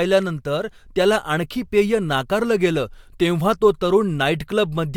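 Speech, with nothing technically wrong that can be heard.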